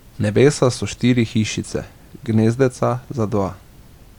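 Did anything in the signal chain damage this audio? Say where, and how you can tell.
No, nothing in the signal chain damaged this audio.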